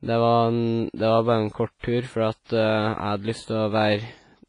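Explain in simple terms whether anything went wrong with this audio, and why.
The speech sounds washy and ringing, with hiss that rises and falls, and nothing above 10.5 kHz. The likely cause is heavy WMA compression.

There is also pre-echo, a brief hiss just before sharp sounds, at 1.79 to 1.83 s and 2.44 to 2.49 s. The codec smears noise ahead of each attack.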